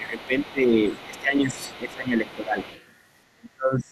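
From the start to 0.77 s the talker dips by about 10 dB, and from 1.05 to 2.58 s by about 15 dB. The final stretch from 3.33 s to the end drops by about 30 dB and nearly vanishes. This is speech suppressed in double talk, likely an echo canceller turning everything down while both sides spoke at once. A faint second voice sits roughly 25 dB under the talker at 0.10–0.52 s, 0.86–1.21 s, 1.52–1.80 s, 2.26–2.35 s and 2.60–2.85 s. This is the other side's voice leaking through, likely loudspeaker echo the canceller failed to remove from the microphone.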